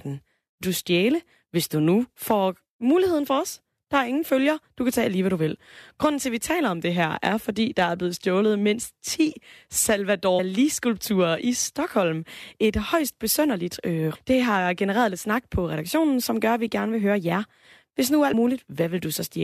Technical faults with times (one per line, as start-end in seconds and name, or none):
0.61 damaged data in a compressed stream
10.38 damaged data in a compressed stream
14.14 damaged data in a compressed stream
18.32 damaged data in a compressed stream